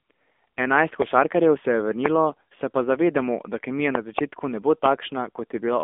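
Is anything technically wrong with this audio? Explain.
Yes. Throughout, the speech carries AMR narrowband mobile codec damage. The band stops near 3.6 kHz, and a vocal-tract model coding at a low bitrate, probably around 7.4 kbps, leaves a buzzy, synthetic tone. That tone sets it apart from plain band-limiting.

There are also two loud pop events. The first, from 2.06 to 2.08 s, is a single pop between "se je" and "se pa zavedamo da". The second, from 3.95 to 4.21 s, is a double pop after "pa zavedamo da kemija" and before "ne bo". Both jump some 20 dB above the speech, which continues underneath. That sets them apart from dropouts or clipping. The likely cause is a voltage spike, such as a switch or static discharge.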